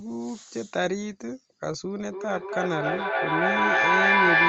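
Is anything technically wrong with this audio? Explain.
Yes. From 2.11 s to the end of the speech clip at 4.48 s there is feedback echo between two devices. Two devices in the same room share the call, so one loudspeaker replays what the other microphone sent, and that microphone captures it again, beyond the reach of either echo canceller. Each word returns roughly every 300 ms, thinner and ringing, and because the loop gains level the repeats pile up, peaking at about 8 dB above the speech. On a spectrogram this shows as stacked copies of each word spaced about a third of a second apart, and in the waveform as a growing rather than decaying envelope. The empty spectrum above 8 kHz reflects the wideband call codec.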